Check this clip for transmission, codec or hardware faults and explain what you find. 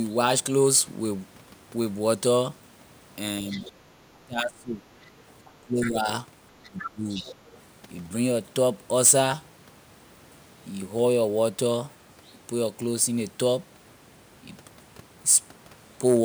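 Two echo-control faults show up, both between 3.5 and 7.6 seconds.

Other side's voice leaking through, at 3.49 to 3.72 s, 5.02 to 5.91 s and 6.63 to 7.57 s. A faint second voice sits under the speech, about 20 dB down at first, then about 15 dB down. The likely cause is an echo canceller that left some loudspeaker sound in the microphone feed.

Speech suppressed in double talk, at 4.25 to 4.84 s, 5.61 to 6.07 s and 6.65 to 7.25 s. The main voice sinks in pieces, roughly 35 dB at its deepest, then about 20 dB. Both sides likely talked at once, and the canceller turned everything down.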